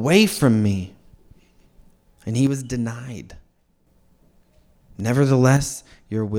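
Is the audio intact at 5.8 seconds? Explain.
No. At 5.8 seconds the speech sits inside a span from 5.57 s to the end at 6.39 s where one channel drops out. The likely cause is a lost stereo channel. The sound falls abruptly by about 6 dB and is otherwise unchanged.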